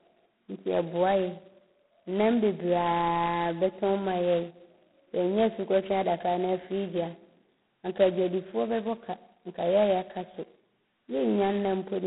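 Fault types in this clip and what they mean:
G.726 ADPCM: the speech is coded as coarse differences from a running prediction, and the harsh hiss that swells with loudness fits 16 kbit/s. A spectrogram shows noise filling between harmonics during loud speech, a 150 Hz to 3.4 kHz band, and nothing above 3.9 kHz.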